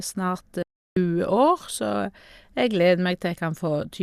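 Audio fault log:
0.62–0.97 s, digital broadcast dropout. The speech fades out within 3 ms and stays silent for 0.34 s before resuming. The receiver lost valid frames and muted until good ones returned. The gap fits roughly fourteen lost frames, and that stretch of speech is gone.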